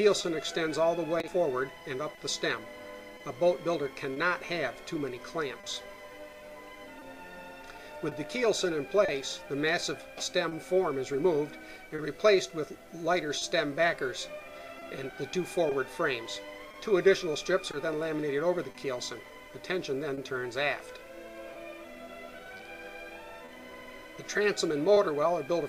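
Clock drift between sender and receiver runs through the whole clip. The sender's clock is around 2 percent slow, so the receiver's buffer keeps draining and it repeats short slices. The sound stutters with small hiccups at uneven intervals.

Scattered short gaps appear from 0.21 s to 24.98 s, roughly twenty of them, where packets went missing or arrived late. Each hole, the longest around 30 ms, was bridged by extending the preceding sound, about half a second in all, heard as brief ticks and smears.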